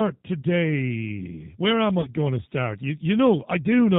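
Throughout, the speech carries G.729 codec damage: nothing above 4 kHz, a rough, slightly synthetic texture, consistent with 8 kbit/s model-based coding. At 0.41 to 0.45 s and again at 2.01 to 2.10 s, just before "going to start", VoIP packet loss concealed by the speech codec extrapolates about 30 ms of missing audio into a fading buzzy tone or coloured noise.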